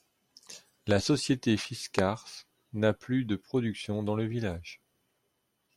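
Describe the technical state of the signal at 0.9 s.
A single loud pop at 0.91–0.93 s stands well above the speech, likely a voltage pulse from a plug or switch. Unlike a dropout, the speech continues unbroken underneath.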